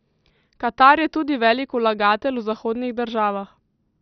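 The whole clip carries heavy MP2 compression damage. Nothing is heard above about 6.2 kHz, so the speech sounds dull and boxed in. The likely cause is an MPEG Layer II encode at a very low rate, which fits about 48 kbps. With so few bits, the upper sub-bands are switched off. Those that remain flicker in and out and are coarsely quantised. The result is a gurgling, granular texture.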